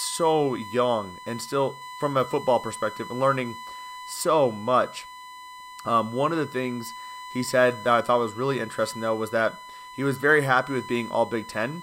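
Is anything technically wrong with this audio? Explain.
Yes. Throughout the speech, a steady, fixed-pitch whine sits at 1 kHz, strong enough to be plainly audible, roughly 15 dB below the speech itself, and it never shifts with what is being said. This is USB whine: the USB bus pulls current in bursts timed to its 1 ms frames, and that pulsing leaks into the audio path through shared power or ground, so the 1 kHz frame rate itself becomes an audible tone.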